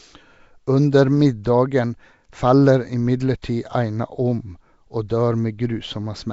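From start to end the speech carries a rough, hissy halo and a smeared, underwater quality, with nothing above 7.7 kHz. This is likely Nellymoser compression. Its fixed two bits a sample starve weak bands, which are refilled with noise, and the damage points to a rate around 32 kbps. Plain band-limiting would sound dull but clean, not grainy.

At 3.42 s, pre-echo puts a brief hiss, about 15 ms long, just ahead of a sharp attack, which then lands softened. The codec spread noise meant for the loud onset across the quiet moment before it. A click or dropout would sit at the attack itself rather than leading into it.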